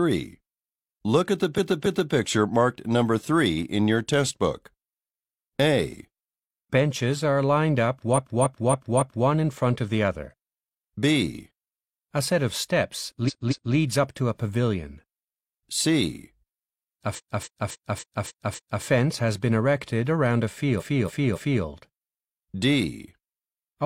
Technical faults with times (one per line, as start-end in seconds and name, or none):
1.54-2.09 repeated frames
8.13-9.24 repeated frames
13.24-13.70 repeated frames
17.14-18.82 repeated frames
20.76-21.60 repeated frames